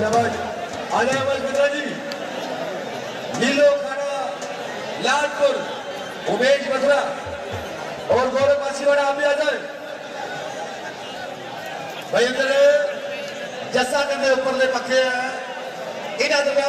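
No faults can be heard anywhere in this recording.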